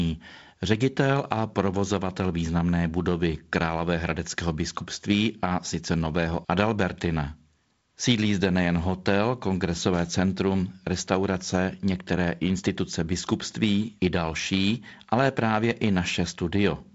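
Nothing stood out on listening to this speech, which comes through a wideband telephone path with nothing above about 7.7 kHz.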